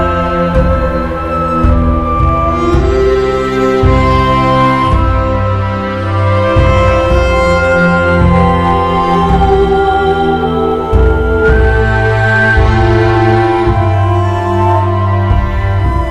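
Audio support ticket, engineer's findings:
Hard clipping, throughout. Crackle on loud peaks. Signal driven about 6 dB past full scale, but only a small fraction of samples exceed it. Probable component: gain stage ahead of the converter, or a fixed-point format limit. Waveform: peaks sheared flat. Spectrogram: brief broadband vertical streaks reaching the top of the spectrum at each clipped peak.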